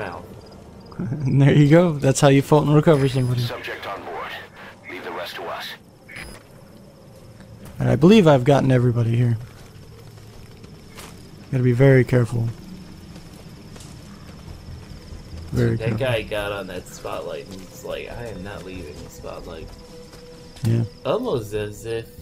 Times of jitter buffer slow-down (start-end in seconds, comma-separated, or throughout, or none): none